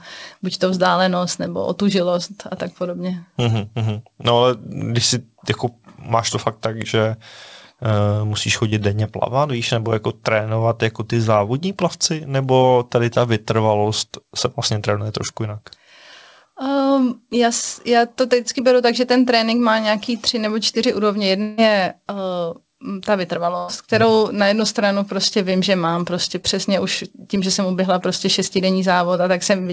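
Short concealed packet loss first appears between 8.70 and 8.74 s. About 20 ms of audio never arrived in time, and the receiver covered the hole with roughly 20 ms of its own continuation. It extended the preceding sound from its pitch or as shaped noise, then blended back into the real signal. The same brief smear recurs between 25.50 and 25.53 s, where about 14 ms fills a 20 ms loss, and between 26.41 and 26.46 s, where about 22 ms covers 20 ms.

At 21.42 to 21.59 s the sound is replaced by a held continuation of what came just before, a buzz or hiss that fades over about 155 ms, with no silence. When the real audio returns, roughly 160 ms of it is gone. This is likely a long network dropout: nothing reached the receiver for that stretch, so it stretched the last sound and then rejoined the stream further on.

A burst of packet loss follows at 23.57 to 23.70 s. Several consecutive packets failed to arrive in time to play, leaving about 100 ms of audio missing. 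The receiver bridged it with about 105 ms of continuation, turning the final sound into a sustained buzz or a fading hiss while lowering its level. The audio then picks up further along, without the section in between.

Throughout, the band stops at 8 kHz with ordinary call-codec coding noise, which points to a wideband G.722 path at around 64 kbps.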